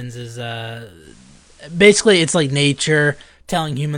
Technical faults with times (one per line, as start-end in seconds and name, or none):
0.99-3.34 digital radio blending to analogue